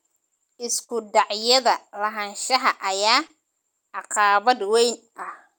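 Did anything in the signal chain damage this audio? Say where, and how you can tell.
Yes, at the network stage. From 0.83 to 0.91 s there is a burst of packet loss. The receiver holds and fades the last sound for about 55 ms, then resumes about 60 ms further on. The skipped stretch sets it apart from a simple mute.

Short concealed packet loss follows at 3.27 to 3.31 s, also network-side. About 23 ms was synthesised from the preceding sound and blended back, and about 20 ms of audio was lost. Being far briefer than the earlier burst, it registers as a quick smear, not a held, fading tone.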